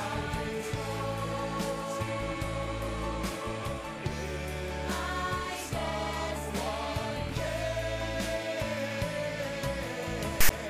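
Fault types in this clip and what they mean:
File tags played as audio: right near the end, from 10.41 to 10.50 s, the player reads a block of text tags as if it were sound, so you get a hard-edged, lopsided rasp that drops into dead silence where the tag's zero padding sits.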